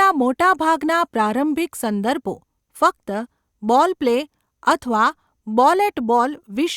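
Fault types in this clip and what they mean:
No fault types are present in this clip, so there is nothing to list or explain.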